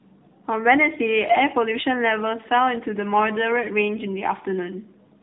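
Tandem speech coding runs through the whole clip. The speech was decoded and re-encoded at a network boundary, so a second speech coder worked on the first one's already damaged output. The character fits two AMR-NB-style narrowband coders with a plain telephone-rate link between them. Nothing comes through above 3.8 kHz, so the speech sounds muffled. The two coding passes add to each other, giving a rough, warbly texture that is worse than either pass alone.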